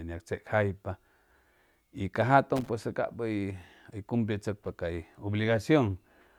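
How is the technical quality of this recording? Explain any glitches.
The recording has one glitch. Loose connector crackle appears from 2.56 to 2.69 s: a worn or dirty contact in the signal path briefly makes and breaks, chopping the speech. It sounds like a short, irregular scratchy burst lasting about 130 ms.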